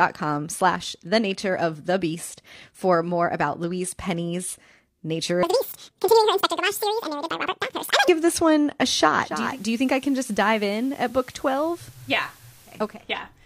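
From 5.43 to 8.08 s a section at the wrong speed runs 1.86 times fast, about ten semitones up, likely a wrong clock, just before "this one a". Then at 9.21 s, after "this one a", digital radio blends to analogue FM over 0.4 s: hiss around 30 dB down, level about 2 dB lower until 13.06 s.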